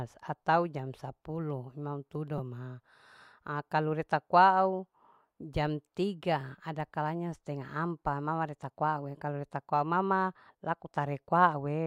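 At 2.38 s there is a repeated buffer. New audio did not reach the device in time. It replayed the same 5.3 ms slice three extra times, which fits a 256-sample buffer. The hard joins make a brief buzz. Nothing appears to be skipped.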